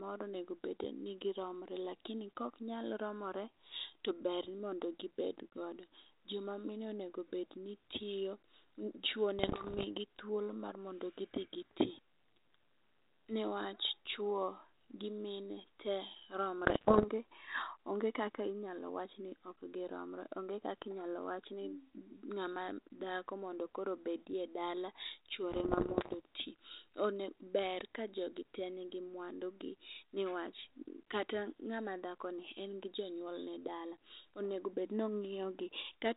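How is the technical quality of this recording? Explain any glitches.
Telephone-band speech with a light G.726 ADPCM character: nothing above 4 kHz, consistent with a 32 kbit/s cordless-style link. Three short rough patches break through. Pops and gritty bursts with brief level jumps at 9.39–9.85 s (just before "thuolo mar mondi gidhi"), 16.62–17.06 s and 25.51–26.15 s are bit errors on an ADPCM link. Roughly one bit in a hundred flipped in the first and last patches and about 0.7 in a hundred in the middle one, knocking the decoder's step size and predictor off so each error rings on briefly.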